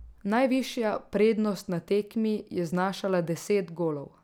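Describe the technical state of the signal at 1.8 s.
At 1.8 s the speech signal is intact, with no audible fault at that point.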